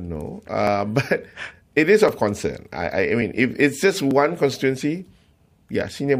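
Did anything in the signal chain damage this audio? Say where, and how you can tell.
Yes. At the driver or buffer stage, samples were likely overwritten before being read, a dropped buffer (overrun). The speech skips ahead with no gap: at 0.67 s (roughly 15 ms lost), and briefly at 2.09 s after "but it is", 3.22 s after "concern I I I", and 4.11 s after "it's just".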